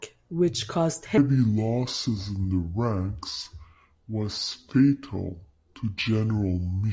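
Speech clip where, from 1.18 s after "which caused" to the end, a wrong sample rate slows everything to two-thirds speed and drops pitch about 7 semitones, fitting 24 kHz audio played at 16 kHz. Unlike time-stretching, speed and pitch shift together.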